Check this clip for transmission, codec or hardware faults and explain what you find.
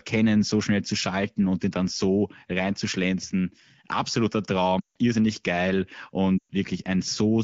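Two stretches of lost AMR speech frames, at 4.80 to 4.96 s and 6.37 to 6.52 s. The decoder repeats the last good frame with falling gain, so speech fades to near silence, then returns rough, under light wideband coding.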